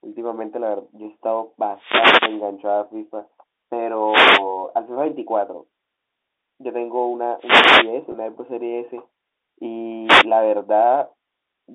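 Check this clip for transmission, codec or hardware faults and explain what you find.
Two kinds of fault are present in this speech: four wireless microphone noise hits and one brief packet loss with pitch repetition. The G.711 telephone coding path passes only about 250 Hz to 3.7 kHz, as a phone line should.

The wireless microphone noise hits fall at 1.73–2.46 s, 4.05–4.45 s, 7.38–7.93 s and 10.04–10.27 s. Each time, the analogue FM radio link fades as reflected signals cancel at the receiver. Receiver noise climbs into the gap, so each hit sounds like a swish or burst of static riding over the speech, lasting from about a quarter second to nearly three quarters of a second.

The packet loss with pitch repetition runs from 8.12 to 8.14 s. Roughly 20 ms of audio went missing, which fits a single lost packet. The receiver filled the hole by repeating the last pitch period and fading it down. 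Because the gap is so short, it comes across as a momentary held, slightly buzzy tone rather than a dropout to silence, just after the third static burst.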